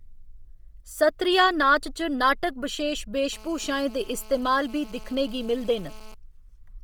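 A speech recording carries heavy codec damage for its whole length, most likely from Bluetooth LC3 compression. The upper spectrum sounds thin and grainy, with a breathy, noise-filled edge where detail has been dropped and replaced. The degree of damage fits a low bitrate around 32 kbps with 10 ms frames. On a spectrogram the top of the band reaches about 20.2 kHz but looks patchy and speckled rather than continuous, with a faint blocky time grid at roughly 10 ms steps.

From 3.33 s to 6.14 s a GSM phone buzz sits over the speech. This is a hard, raspy tone at 217 Hz, about 22 dB below the speech, produced when the audio circuit rectifies a nearby handset's radio bursts. It holds steady throughout, as it does during an active call. A spectrogram shows a stack of evenly spaced horizontal lines at multiples of 217 Hz, and the waveform shows regular spikes about 4.6 ms apart.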